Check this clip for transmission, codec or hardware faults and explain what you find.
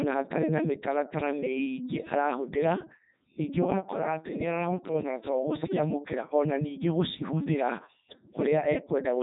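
One codec fault runs through the entire speech clip: Codec 2 vocoder damage, heavy throughout. The decoder keeps only pitch, voicing, energy and a spectral envelope, then rebuilds the speech from sine waves, so it sounds robotic and buzzy, with nothing above 3.8 kHz, which fits the 3.2 kbit/s mode. A waveform codec degrades the original signal into smearing or warble, whereas here the waveform itself is gone and replaced by synthetic tones.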